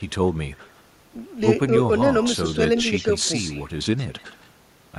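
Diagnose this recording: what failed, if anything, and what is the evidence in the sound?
Echo leak at 0.56–0.81, 2.22–2.56, 2.78–3.06, 3.24–3.64 and 3.97–4.49 s: a delayed copy trails the speech by 160–167 ms, from about 40 dB to about 15 dB below it. This is call processing, likely an echo canceller passing loudspeaker pickup back.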